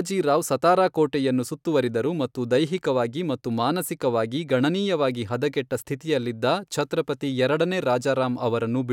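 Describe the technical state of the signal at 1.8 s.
At 1.8 s the signal is intact, with no audible fault in the speech at that point.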